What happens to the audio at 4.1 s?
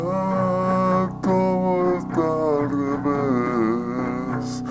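At 4.1 s the sound is still affected by the wrong sample rate that runs throughout. It plays at 0.667 speed and about 7 semitones lower, consistent with 24 kHz material played at 16 kHz.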